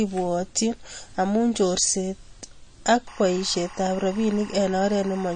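The speech is band-limited throughout, with nothing above 9.3 kHz, and has a watery, swirling texture with smeared consonant attacks. This is likely MP3 compression at a low bitrate, around 32 kbps: the encoder cuts the treble and drops weak spectral lines, which flicker frame to frame.

From 3.08 s to the end, a steady chirping warble sits behind the speech, roughly 20 dB below it. This is timecode bleed: a linear timecode square wave, consistent with 23.976 fps code, leaking in and alternating between pitches near 1 kHz and 2 kHz.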